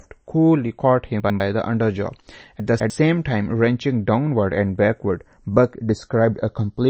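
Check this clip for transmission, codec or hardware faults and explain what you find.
Three faults are audible in this speech clip: the two channels drift against each other, lossy compression damages the whole clip, and two short stretches play out of order.

Channels drifting apart runs from start to finish. The two sides appear to run on separate clocks roughly 50 ppm apart, so their offset creeps up to a fraction of a millisecond by the end. Summed to mono, this gives a slow, moving flange. A fixed delay would give a static comb instead.

MP3 compression is also present throughout, and its damage is plainly audible. Nothing reaches above 8.3 kHz. The remaining sound has a watery, swirling texture, and consonant attacks are smeared. That points to a low bitrate, likely around 32 kbps. The swirl from weak components flickering on and off separates this from a simple low-pass filter.

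Chunks out of order occur at 1.2–1.4 s and 2.6–2.9 s. The audio appears to be cut into blocks of about 100 ms. In the first stretch one block plays a step late, and in the second one plays two steps late. Each stretch sounds briefly jumbled. Unlike a dropout, no sound is missing. It is only rearranged.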